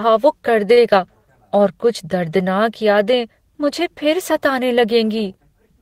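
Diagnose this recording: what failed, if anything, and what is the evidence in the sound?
The failure is in the network path: a short stall from a late packet at about 0.73 to 0.80 s in this speech clip. A packet missed its playout time and the jitter buffer ran dry, so the receiver held the last sound for roughly 37 ms, heard as a brief smeared prolongation. Nothing is dropped; playback resumes exactly where it stopped, but everything after is about 37 ms later.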